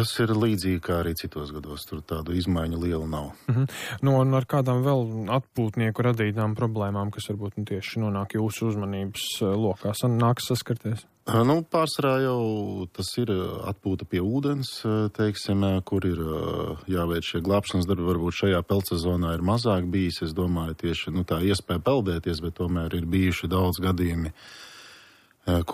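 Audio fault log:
Nothing stood out on listening.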